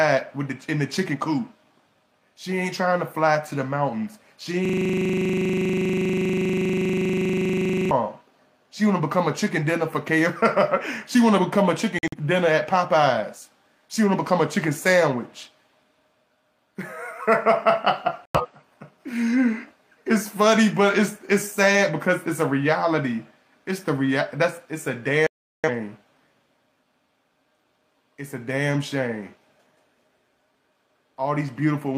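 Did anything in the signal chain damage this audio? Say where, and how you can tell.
Yes. At the driver or buffer stage, a system hang loop runs from 4.65 to 7.91 s. A single 40 ms slice repeats exactly, roughly eighty times, producing a rigid 25 Hz buzz. The host stalled while the hardware kept replaying the same ring buffer.

At the codec stage, corrupt frames were muted at 11.99 to 12.17 s, 18.25 to 18.46 s and 25.27 to 25.70 s. Each is an abrupt silent hole lasting several frame lengths, with timing preserved. The decoder rejected damaged frames and the player substituted silence.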